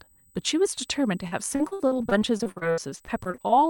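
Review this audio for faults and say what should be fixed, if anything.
A USB whine runs through the whole clip as a steady 8 kHz tone, roughly 35 dB below the speech. The bus draws current in 125-microsecond microframes, and that rhythm leaks through shared power or ground into the audio path as a fixed pitch. On a spectrogram it is a thin horizontal line at 8 kHz from start to finish, unaffected by the speech. To prevent it, power the interface from a clean supply or use a ground-isolated or powered hub.

From 1.27 s to 3.51 s there is repeated packet loss, giving a robotic sound. Twenty-two short holes follow one another, the longest around 63 ms. Each is patched by extending the preceding sound, so roughly 29% of that stretch is filled-in rather than real audio, and the speech turns choppy. On a waveform the envelope looks stuttered, with repeated, smoothed segments. On a spectrogram the harmonics smear into flat, duplicated blocks with abrupt edges. 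To prevent it, use a wired network or a larger jitter buffer.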